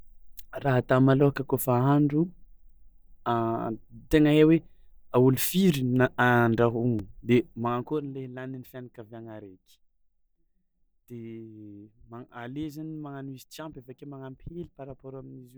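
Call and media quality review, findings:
Block of digital silence at 6.99 s: 2.9 ms dropout, tick. Probable cause is the output buffer not filled in time, which fits a 128-sample buffer. Waveform shows a flat near-silent run with hard edges and no fade. Spectrogram shows a thin vertical broadband line.

Zipper noise from 7.50 to 8.15 s, ending just before "le lanin'ny fianakaviàgna araiky": fine ticking while the level drops by about 15 dB. Probable cause is an unsmoothed gain ramp applied in coarse steps, roughly 50 per second. The waveform envelope descends in stairsteps. The spectrogram shows faint evenly spaced vertical ticks across the fade.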